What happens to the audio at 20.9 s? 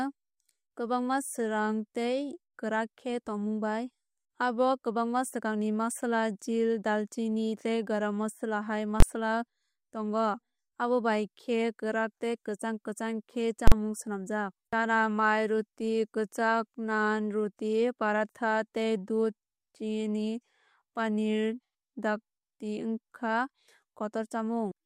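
Nothing goes wrong at 20.9 s; the speech continues intact through that moment, with no dropout, click or distortion.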